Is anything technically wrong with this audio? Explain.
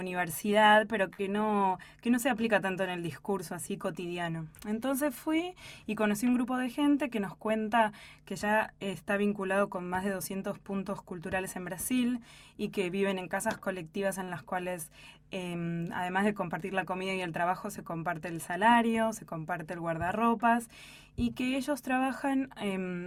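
Yes. There are two short stalls from late packets and two jitter buffer speed-ups.

Short stalls from a late packet occur at 1.13–1.24 s and 14.24–14.29 s. Packets missed their playout time and the jitter buffer emptied, so the receiver held the last sound for 46 ms and then 38 ms before resuming in the same place. Nothing is lost, but a sound lingers with a faint buzz or dip.

Jitter buffer speed-ups occur at 6.44–6.83 s and 18.47–18.89 s. With surplus audio queued, the receiver repeatedly trimmed pitch-period-sized pieces, removing about 50 ms in each stretch. This plays the sound at 112% and then 109% of normal speed with unchanged pitch, so those stretches feel briefly rushed.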